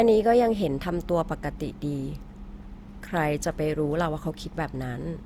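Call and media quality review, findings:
Speech sounds swirly and hollow for the whole clip, with smeared consonant onsets and a watery, phasey texture beyond what a single encode would produce. Top end reaches about 20.2 kHz, so this is not a bandwidth limit. Likely cause is generation loss: repeated lossy decode/re-encode, pointing to about four Opus passes near 64 kbit/s. Each pass re-quantised on a shifted frame grid, stacking noise and blurring transients.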